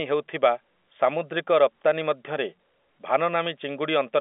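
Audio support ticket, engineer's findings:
No faults found.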